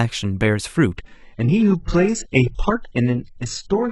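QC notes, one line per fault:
0.97 s to end: adaptive stream at a lower bitrate. The speech switches abruptly, with no gap, from a higher-bitrate rendering to a much thinner one. Nothing is present above 8 kHz. Codec artefacts rise sharply. The sudden, seamless step points to the player dropping from a high-rate AAC stream to a very low-rate HE-AAC rendition after the connection slowed.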